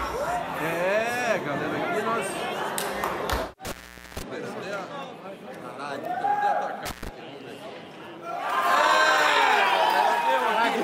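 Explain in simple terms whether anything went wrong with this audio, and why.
Something did go wrong: the audio drops out twice because of an intermittent contact, a loose cable or plug that briefly lost its connection. The first break runs from 3.65 to 4.22 s, with the line open for about 0.45 s. The second, shorter one runs from 6.86 to 7.09 s, open for about 0.12 s. Each time the signal path breaks, the sound cuts out, and the metal contacts scraping apart and back together add a crackle at the start and end of each gap.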